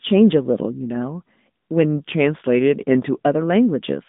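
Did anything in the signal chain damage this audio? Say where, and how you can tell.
Yes. At the codec stage, an AMR narrowband mobile codec runs throughout. Nothing passes above 3.8 kHz, and the buzzy, synthetic speech fits roughly 10.2 kbps coding.

From 1.83 to 3.18 s, speed drops 5.8% and pitch falls 103 cents, then snaps back. A drift correction step in the buffer is the likely cause.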